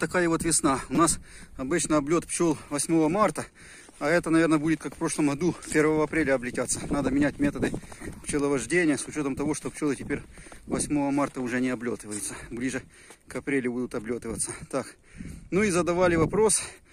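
Two brief buzzing clicks break the audio, at 0.95 s and 2.33 s, each a rapid burst of one tiny fragment played over and over. This is a repeated buffer: fresh audio arrived late, so a roughly 5.8 ms block, which fits a 256-sample buffer, was replayed, losing about 20 ms each time.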